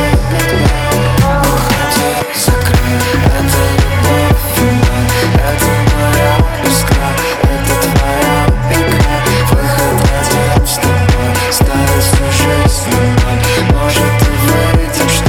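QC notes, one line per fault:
No technical faults were heard anywhere in the signal.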